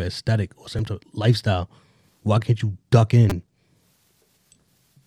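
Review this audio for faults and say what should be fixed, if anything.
There are two repeated-buffer glitches in this speech. At 0.79 s, between "aesthetic or" and "type of lifestyle why", a roughly 5 ms slice plays twice, giving a tiny click. At 3.30 to 3.32 s, right after "why can't you duck", the same slice repeats four extra times, so you get a short buzzy stutter. The new audio didn't arrive in time, and the device replayed its last buffer, which fits a buffer of about 5 ms. Nothing seems to go missing. A larger output buffer or a higher-priority audio thread should stop the underruns.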